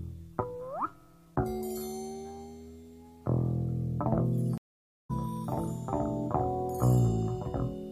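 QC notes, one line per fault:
4.58–5.11 s, stream reconnect: the audio drops to dead silence for about 0.52 s when the connection breaks, then returns from a point roughly 0.4 s further on, so part of the sound is skipped. A fresh decoder starts mid-stream, muting or fading in its first frame or two. The waveform shows a flat gap ending in a soft ramp rather than a hard edge, and the spectrogram shows a blank column with a brief faint onset before full energy resumes.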